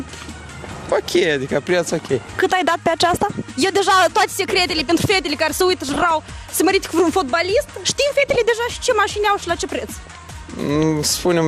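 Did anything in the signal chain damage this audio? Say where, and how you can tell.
Yes. MP2 compression runs throughout: the sound is dull and granular, with upper sub-bands flickering in and out. It is likely a low-rate MPEG Layer II codec, consistent with roughly 80 kbps, starving the upper bands of bits and quantising the remainder coarsely.

DAB burbling at 5.89–6.11 s and 8.20–8.36 s is a reception or transmission fault: short bursts of burbling. Bit errors, on the order of half a percent, slipped past error correction into the audio data, putting short blips of noise into individual sub-bands.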